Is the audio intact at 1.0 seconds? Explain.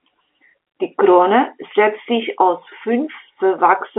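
Yes, the audio is intact at 1.0 seconds: the speech there passes through G.711 telephone coding as expected, with no fault at that moment.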